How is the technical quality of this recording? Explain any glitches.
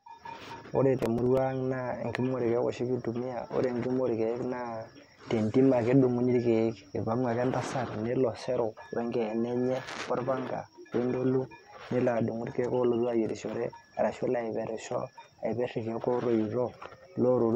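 The recording has one glitch, near the start. Processor overload crackle runs from 0.99 to 1.38 s. The processing could not finish each very short buffer in time, and when a deadline was missed a scrap of already-played audio was repeated with hard edges. The grain of the crackle fits buffers of only a few milliseconds, with several misses in quick succession. It is heard as a gritty, tearing crackle over the speech for under half a second, then it clears.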